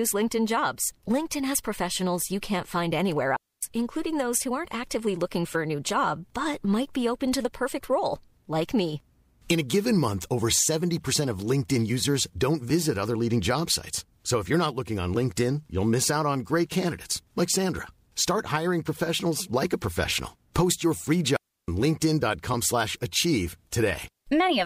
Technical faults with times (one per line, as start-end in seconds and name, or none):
3.36-3.63 digital wireless dropout
11.13 compressed frames skipped
21.36-21.68 digital wireless dropout
22.53 compressed frames skipped